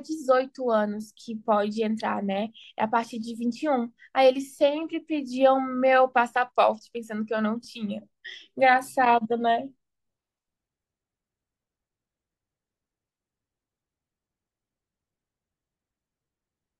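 At 2.64 s and again at 7.65 s the speech hiccups with a brief click-like stutter, the mark of overlapping chunks. The audio was handled in 5.0 s blocks, and each block began about 7 ms before the previous one finished, so that sliver of sound plays twice at the join. Unlike a dropout, nothing is missing; a tiny fragment repeats, and the exact 5 s spacing between the two stutters gives away its block-by-block origin.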